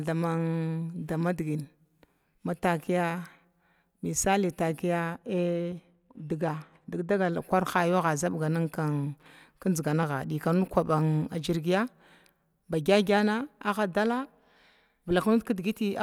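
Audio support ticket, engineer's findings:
De-emphasis applied wrongly, speech, 5.14 s to 7.33 s. Symptom: sudden dull, muffled stretch, then normal brightness returns. Mechanism: treble-cut de-emphasis filter engaged on a path with no pre-emphasis, or stacked twice; response slopes smoothly downward, about 8 dB down at 10 kHz relative to 1 kHz. Spectrogram: upper band visibly darker across that window, gradual rolloff, no hard edge. Waveform: softened transients, envelope largely unchanged. Suspect: filter/emphasis stage in chain.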